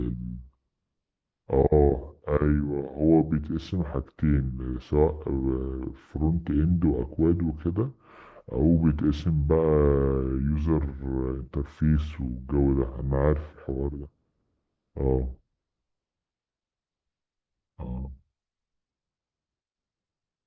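Wrong sample rate throughout this speech: it runs at two-thirds speed and about 7 semitones low, which fits 24 kHz audio played at 16 kHz without conversion.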